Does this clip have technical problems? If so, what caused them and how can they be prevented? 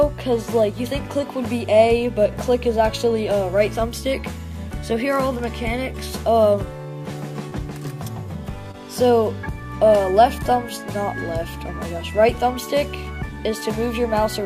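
Yes. Short concealed packet loss occurs at 7.49 to 7.53 s and at 8.71 to 8.75 s. Each time, about 20 ms of data arrived too late, and the decoder filled the gap by extending the preceding sound before blending back. Unlike a true dropout, there is no silent hole, only a brief smear or wobble. A steadier network path or a larger jitter buffer would prevent it.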